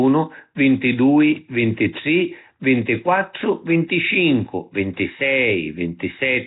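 From start to finish, the speech carries heavy codec damage. Nothing is heard above about 3.8 kHz, so the top end is missing. The sound has a rough, hissy halo and a smeared, underwater quality. This is likely Nellymoser compression, the old Flash microphone codec. It codes short blocks at a fixed, low bit depth, and the damage here fits a rate near 16 kbps. Weak bands get no bits and are filled with noise, which produces that hiss.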